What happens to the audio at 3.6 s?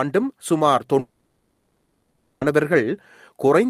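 Nothing goes wrong at 3.6 s; the speech there plays through cleanly, with no dropout, click or other fault.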